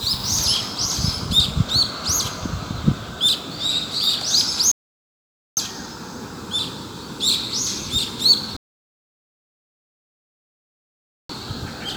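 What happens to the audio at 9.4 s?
At 9.4 s the audio sits inside a rebuffering stall running from 8.57 to 11.29 s. The player has run out of downloaded audio and goes silent for about 2.7 s, then picks up exactly where it stopped. Unlike a dropout, nothing is skipped. The stall only adds time.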